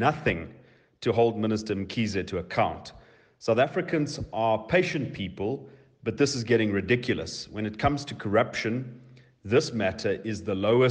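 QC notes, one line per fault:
4.85 s and 8.60 s, dropped samples: each point has a single sharp click, a thin vertical line across the spectrum with nothing missing on either side. The likely cause is a couple of samples vanishing from the stream, a fraction of a millisecond, so the waveform jumps straight to a later value. Unlike a dropout or a gap, no stretch of sound goes silent, and unlike crackle, the two clicks stand alone.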